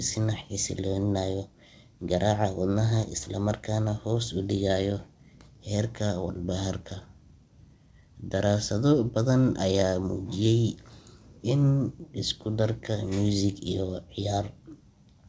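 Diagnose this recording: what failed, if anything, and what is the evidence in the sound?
Nothing failed: the speech has no content above 8 kHz, which points to a wideband call codec such as G.722 working as designed, and no stage from capture to playback shows a defect.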